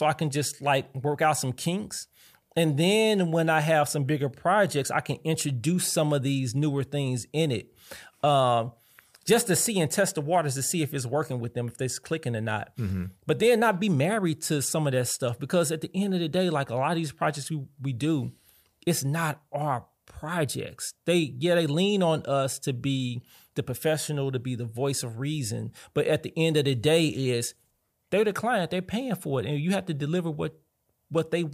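Nothing in the speech recording stood out as a technical problem on listening.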